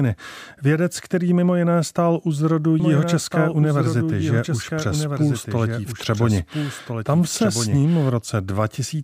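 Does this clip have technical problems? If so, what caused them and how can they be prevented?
Yes. From 2.80 s to 8.10 s the speech is heard twice, with a second copy trailing about one and a half seconds behind, somewhat quieter, full-band and dry, and it cuts in and out abruptly. This is a doubled audio track, most likely from the same signal being captured again through a slower second path and mixed back in. Preventing it means routing the source through only one capture path and muting any monitoring or loopback input that feeds the recording.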